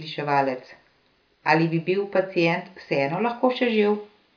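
No technical faults are audible.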